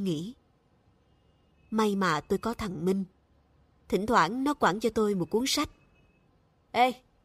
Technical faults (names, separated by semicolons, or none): none